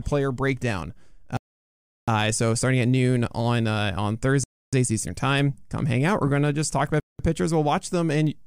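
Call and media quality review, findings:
Bluetooth stall, 1.37–2.08 s, 4.44–4.73 s, 7.00–7.19 s: speech drops to silence for 0.71, 0.29, 0.19 s, then resumes. Likely wireless link: packets delayed by interference, headphone buffer drained, playback held until retransmissions landed.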